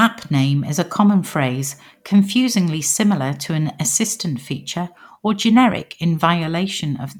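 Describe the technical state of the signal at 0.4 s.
At 0.4 s the speech signal is intact, with no audible technical fault at that moment.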